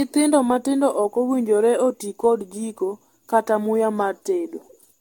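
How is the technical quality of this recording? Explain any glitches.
The technical quality is poor throughout, because of generation loss. The speech has likely been decoded and re-encoded with a lossy codec around ten times over, in a chain whose character fits AAC-LC at 96 kbit/s. Each pass quantises again on a shifted frame grid, so errors and spectral holes pile up rather than cancel. The result is a swirly, hollow, smeared sound, worse than that bitrate alone would give, with blurred consonant attacks and nothing above 17 kHz.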